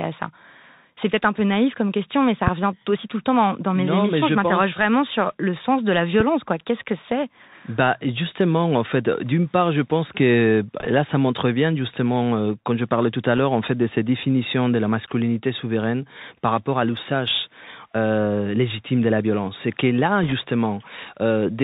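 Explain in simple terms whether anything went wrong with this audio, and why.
Yes, a few things went wrong, and one of them runs through the whole clip. The speech has been squeezed through the Bluetooth CVSD headset codec, the basic voice codec used by Bluetooth headsets. It only records whether the sound went up or down on each tiny step, so anything above about 4 kHz is gone. That's why the speech sounds muffled and phone-like, the s sounds come out scratchy, and there's a grainy hiss underneath everything.

There are two sharp, loud pops sitting on top of the speech, one from 2.47 to 2.50 s, between "comme question mais ça" and "revient aussi tout le", and another from 6.20 to 6.23 s, right after "le sens de la". Each is a single quick crack, and the speech carries on underneath without a break. The likely culprit is an electrical jolt, such as a connector being bumped, a switch, static, or a glitch in the audio hardware.

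Finally, there are short bursts of bit errors on the Bluetooth voice link, where some of the data got scrambled on its way over the wireless connection. You hear a brief rushing crackle rather than a click, at 10.80 to 10.87 s, at 13.37 to 13.39 s, and at 20.23 to 20.33 s just after "que là". Roughly one or two bits in every hundred were wrong, so each burst is a quick fizz that dies away almost immediately.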